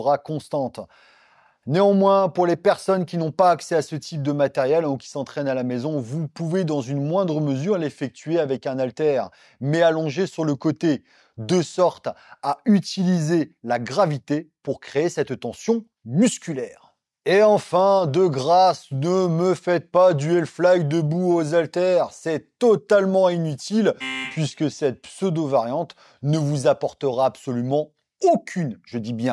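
Nothing here stands out as a technical fault; the sound just carries on steadily with no dropouts, glitches or other disturbances to point to.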